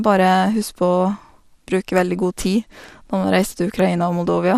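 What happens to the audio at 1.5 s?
At 1.5 s the speech sounds dull and gurgling, with a granular edge, as it does throughout. This is likely MP2 compression at a low rate, around 80 kbps. Too few bits switch upper sub-bands off, and the remaining bands are coarsely quantised.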